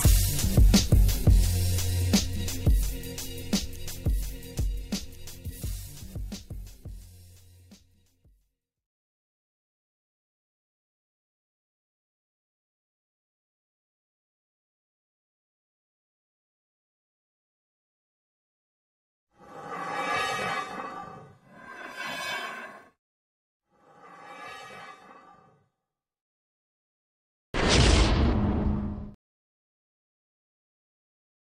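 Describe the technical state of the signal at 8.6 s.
The signal at 8.6 s is intact, with no technical fault audible at that point.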